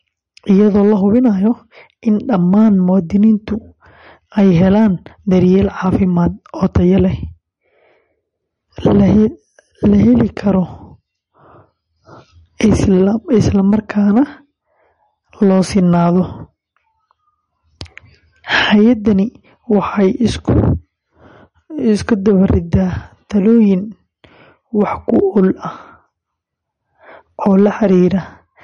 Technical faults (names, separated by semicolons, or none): MP3 compression